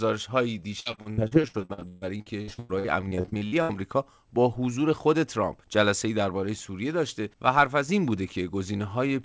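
Repeated packet loss (robotic sound) runs from 0.80 to 3.71 s. Dozens of short holes, the longest 138 ms, are patched by stretching the preceding sound, so about 40% of that span is filler. It sounds choppy, with pieces missing, inside a band that stops at 8 kHz, which fits a wideband call codec.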